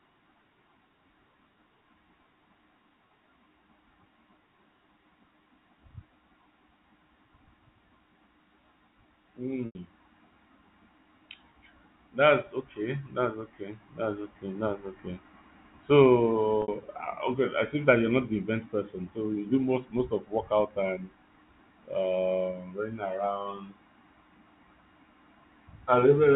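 Speech over a G.711 telephone path, band-limited to 4 kHz, with two instances of packet loss with pitch repetition. At 9.66 s about 90 ms is lost and bridged by repeating the last pitch period, which fades briefly toward silence. At 16.62 s a 60 ms loss gives a short, held, buzzy tone.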